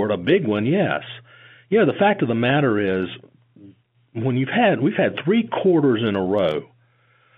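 The speech comes over a standard G.711 telephone line, A-law coded, which fits a 64 kbps stream, with the sound confined to roughly 150 Hz to 3.5 kHz and no faults to report.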